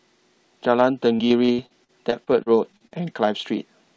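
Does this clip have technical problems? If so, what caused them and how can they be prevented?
Yes. From 1.16 to 3.17 s the speech turns choppy and robotic: this is repeated packet loss. Around a dozen short holes, the longest about 60 ms, were each patched by stretching the preceding sound, so roughly a fifth of that stretch is synthetic fill. On a spectrogram this shows as smeared, repeated harmonic slices and brief dropouts; the waveform shows clipped-off segments and looped fragments. The energy stops at 8 kHz, which points to a wideband call codec. To prevent it, improve network stability or enable forward error correction and a larger jitter buffer.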